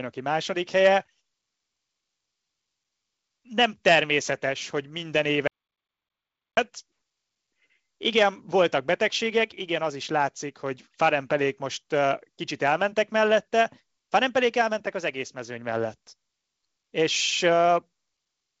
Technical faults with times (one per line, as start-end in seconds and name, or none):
5.47-6.57 audio dropout to silence